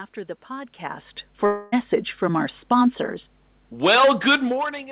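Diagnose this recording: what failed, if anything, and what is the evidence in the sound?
Mains hum enters at the analogue wiring stage, where a ground loop or nearby transformer couples the 50 Hz power line into the signal. A steady low tone sits under the speech for the whole clip, about 30 dB below it.

A long network dropout, likely from lost packets, hits between 1.46 and 1.74 s, just after "the podcast". The receiver stretches the last sound into a fading buzz across the 0.26 s gap, and speech resumes at "from our sponsors" with that stretch missing.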